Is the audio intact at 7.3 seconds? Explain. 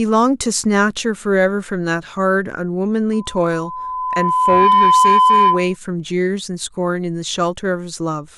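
Yes, the speech at 7.3 seconds is intact, with no audible fault at that moment.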